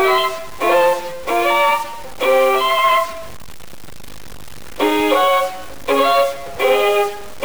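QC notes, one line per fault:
Throughout: stuck bit, likely. A harsh, buzzy distortion rides on everything, and it is tied to the waveform rather than sitting underneath it as a steady hiss. The quiet stretches don't go clean. They fill with a rough noise at roughly -30 dBFS. That points to a single data bit held fixed, probably a fairly high bit, which shifts about half the sample values by that bit's weight. Near silence the error flips with the signal's sign, so the gaps buzz. Plain clipping or dither noise would not do that.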